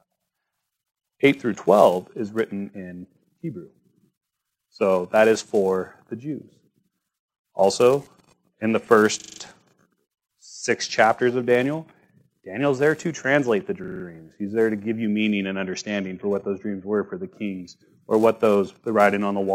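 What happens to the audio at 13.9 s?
A system hang loop runs from 13.84 to 14.04 s. The system stalled while the audio hardware kept replaying its ring buffer, so a single 40 ms slice repeats five times, giving a rapid 25 Hz stuttering buzz, with essentially no audio lost.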